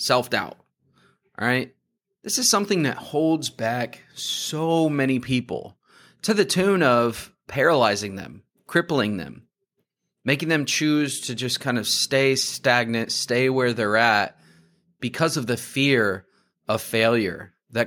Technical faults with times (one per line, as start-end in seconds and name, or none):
none